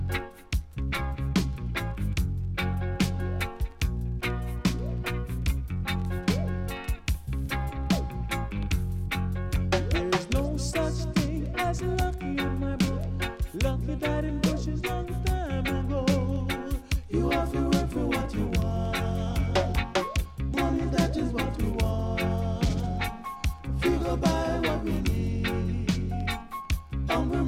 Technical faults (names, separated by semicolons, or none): none